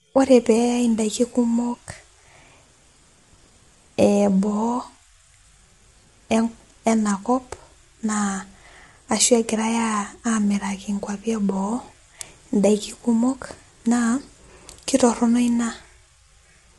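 From start to finish the speech has a rough, grainy texture, with noise sitting between the harmonics and nothing above 11.6 kHz. That's likely low-delay AAC compression, the AAC-ELD flavour used on video calls. Its short frames can't resolve pitch harmonics cleanly and eat bits, so the damage is plainly audible here. The coarseness and the missing top band point to a bitrate of around 32 kbps.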